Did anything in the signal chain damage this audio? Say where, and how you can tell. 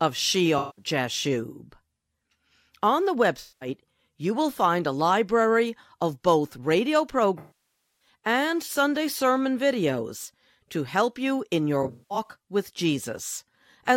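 Yes, at the codec stage: AAC frame loss with concealment. Frames never reached the decoder, so it rebuilt each gap from the last good spectrum. At 0.58–0.84 s, and at 3.40–3.69 s just before "you will find", speech smears into noisy, phasey patches. After "library of both radio", 7.39–8.08 s, the gap decays toward silence and fades back. After "to help you in", 11.82–12.30 s, shorter losses are scattered, the longest about a fifth of a second.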